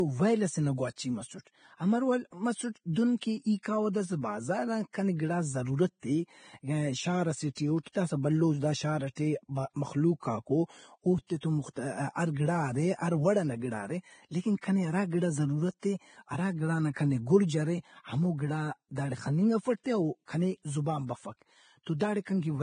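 From the start, the speech is band-limited with nothing above 9.7 kHz, and the upper range sounds hissy and grainy. This is likely Vorbis compression at a low bitrate, consistent with roughly 23 kbps. Heavy quantisation turns fine treble detail into noise, roughening tones and blurring attacks.

From 3.63 to 3.65 s, a sharp onset is preceded by a brief hiss spread over about 25 ms. This is pre-echo. The codec spread quantisation noise sized for the loud attack across its whole transform block, including the quiet lead-in, so the attack sounds smeared.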